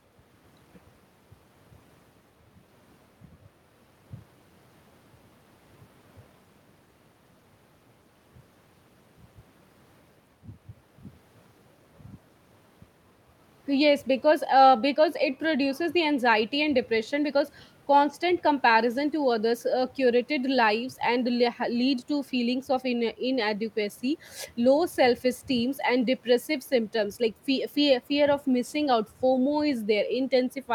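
No technical faults are audible.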